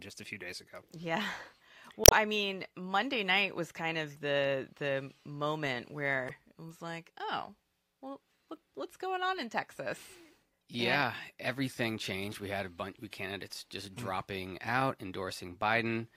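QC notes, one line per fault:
2.03–2.13 s and 6.26–6.31 s, damaged data in a compressed stream: a short glitch of about 100 ms and then a briefer blip of about 44 ms break into the speech. Corrupted bytes made the decoder misread those frames and lose sync until it found a valid header again. The decoder losing sync on bad data sets this apart from a plain dropout, which leaves silence, and from packet-loss concealment, which smears or repeats the sound.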